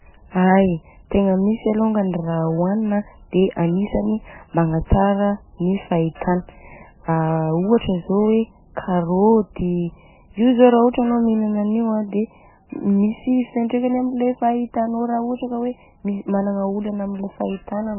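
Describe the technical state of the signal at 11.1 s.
At 11.1 s the speech carries heavy MP3 compression damage, and it runs through the whole clip. Nothing is heard above 3 kHz, so the top end is simply gone. Weak frequency detail flickers in and out between frames. The result sounds watery and swirly, with s sounds smeared and metallic. The likely cause is MP3 coding starved of bits. The damage fits a very low bitrate, around 9 kbps.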